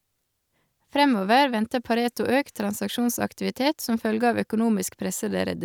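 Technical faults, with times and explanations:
No technical faults detected anywhere in the speech recording.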